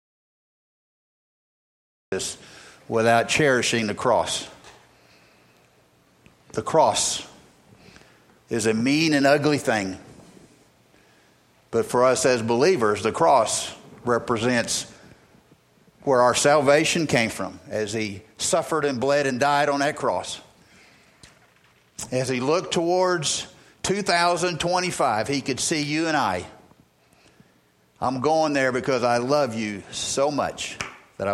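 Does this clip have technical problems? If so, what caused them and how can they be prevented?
Yes. An audio dropout to silence runs from the very start to 2.12 s: the clip opens in silence, with no room tone, before the sound comes in already mid-flow. The input was likely lost while the recorder kept writing silence. Checking connections and mute states before recording begins prevents this.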